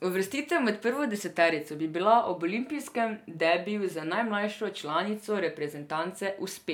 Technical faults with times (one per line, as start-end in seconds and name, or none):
none